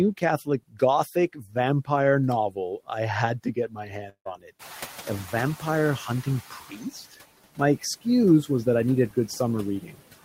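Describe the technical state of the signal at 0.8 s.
At 0.8 s the speech is being cut by the noise suppressor, within a stretch from 0.17 to 1.89 s. Soft parts it misreads as noise sink by up to about 18 dB, sounding swallowed rather than abruptly silent like a dropout. Noise suppressor artifacts run throughout as well, with the background pulled down by about 16 dB between words.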